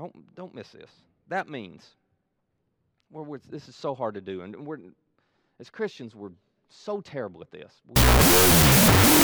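From 7.96 s to the end, loud hiss swamps the speech, which plays at half speed an octave low: a wrong sample width, which fits 16-bit data read as unsigned 8-bit.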